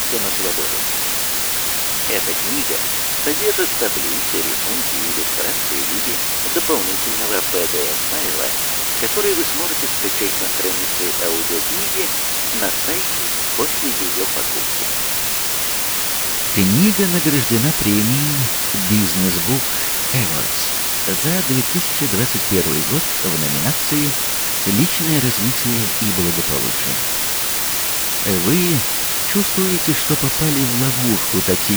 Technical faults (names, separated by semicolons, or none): low bit depth with dither